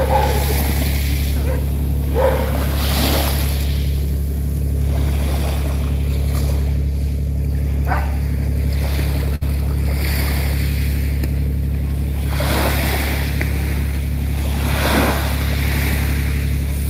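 The audio has a single burst of packet loss from 9.35 to 9.43 s. Roughly 56 ms of it is concealment: the receiver keeps extending the last sound it received and fades it as the gap continues, so it comes across as a brief held, dimming sound rather than silence. About 60 ms of the original material never arrives. On a spectrogram the frames there smear horizontally and decay, then the content jumps abruptly to new material. The waveform shows a repeating, shrinking envelope before the audio resumes.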